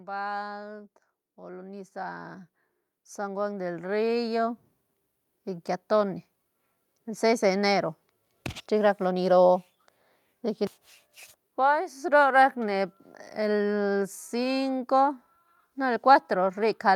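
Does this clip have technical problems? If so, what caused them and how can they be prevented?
Yes. Automatic gain rising runs from 0.05 to 5.75 s: the gain control judged the input too quiet and kept turning it up, so speech and background noise swell together by about 16 dB. Setting a fixed input gain beforehand and disabling automatic gain control prevents this.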